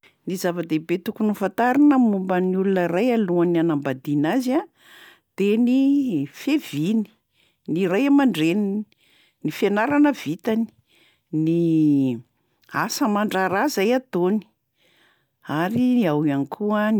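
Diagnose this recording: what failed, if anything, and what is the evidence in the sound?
Nothing failed; no stage shows any audible fault.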